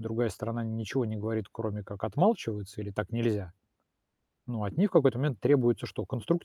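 No technical faults are audible.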